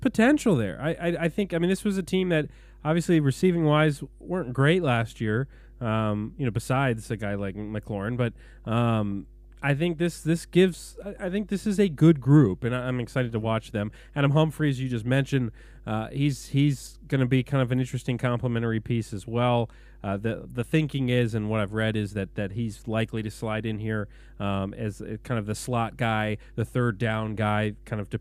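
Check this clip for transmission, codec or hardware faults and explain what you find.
One fault runs through the whole speech clip: mains hum. A ground loop or nearby transformer leaks the 50 Hz supply into the signal, leaving a steady low tone roughly 25 dB below the speech. Its fixed pitch sets it apart from irregular rumble.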